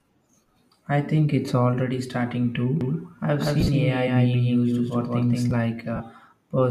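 From 2.81 s, just after "think it's already starting", until 5.51 s, the speech is doubled: a second full-band copy, about as loud as the first, trails by roughly a fifth of a second. This doubled audio track most likely comes from the audio being picked up again through a slower path. Unlike an echo or room reflection, the copy has no decay or reverberant colour. It starts and stops abruptly, and the repeat keeps one fixed spacing.

Lost LE Audio frames appear twice. Between 3.60 and 3.69 s, about 52.5 ms of audio goes missing in short bursts spread over 75 ms, the longest near 30 ms. That fits about seven dropped 7.5 ms frames. The second loss runs from 5.96 to 6.00 s and lasts 37.5 ms, which fits five frames. In both places the LC3 decoder fills the gaps with the previous spectrum given random signs, so the speech turns into a brief noisy smear. This sets it apart from a clean dropout to silence or a clicking cut.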